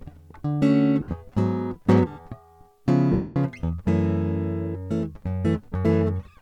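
At 1.01–1.11 s and again at 3.12–3.36 s, lost LE Audio frames leave gaps that the decoder covers by repeating the last spectrum with scrambled phase. In the music, the first event spreads about 80 ms of short dropouts across 100 ms, the longest about 50 ms, and turns held tones into a brief noisy smear. The second gap is 240 ms long and fades gradually toward silence. On a spectrogram, sharp harmonic lines blur into diffuse noise bands, and the waveform's envelope sags and then decays.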